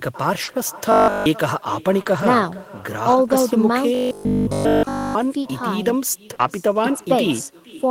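Throughout the clip, an echo with no canceller follows the speech. It arrives about half a second late, at about 19 dB below it. It sounds thin.

From 0.43 to 3.41 s there are scattered short gaps. About four small holes, the longest around 40 ms, were patched over. They cause brief ticks and hiccups.

From 0.92 to 1.26 s, and again from 3.95 to 5.15 s, the sound turns into a rigid metallic buzz at 50 Hz. This is robotic sound, likely from a 20 ms buffer being repeated.

From 6.35 to 6.41 s there is short concealed packet loss. About 40 ms of audio was missing and replaced by an extension of the preceding sound. It causes a brief smear.

Overlapping this, from 6.39 to 6.45 s, a lost packet is rebuilt from error correction. About 40 ms is played from lower-quality backup copies, which points to two lost packets. It sounds rougher and noisier.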